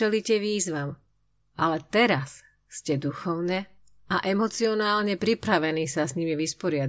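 Nothing technically wrong turns up in this speech recording; it just sounds the way it should all the way along.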